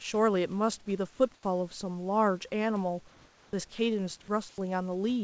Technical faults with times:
1.34-1.43 comfort noise in place of the background
3.08-3.53 comfort noise in place of the background
4.49-4.58 comfort noise in place of the background

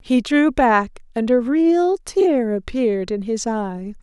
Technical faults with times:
none

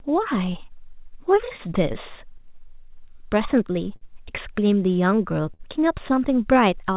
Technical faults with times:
0.00-6.96 clock drift between sender and receiver
0.34-4.03 scattered short gaps
0.72-6.91 repeated timing corrections
5.54-5.61 short stall from a late packet

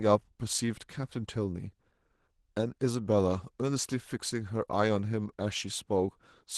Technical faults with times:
0.00-6.58 Opus voice compression

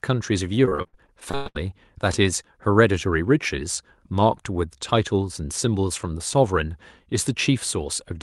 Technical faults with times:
0.65-1.57 repeated packet loss (robotic sound)

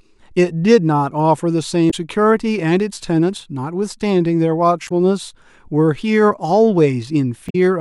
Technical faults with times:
1.87-1.94 damaged data in a compressed stream
4.85-4.92 damaged data in a compressed stream
7.46-7.55 damaged data in a compressed stream

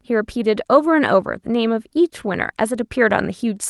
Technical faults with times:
none

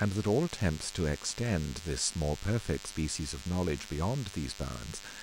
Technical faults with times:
0.00-5.23 DECT cordless phone buzz

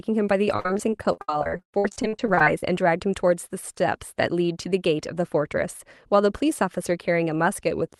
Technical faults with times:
0.50-2.63 repeated packet loss (robotic sound)

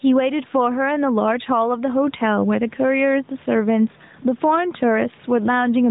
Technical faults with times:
0.00-5.90 gain pumping

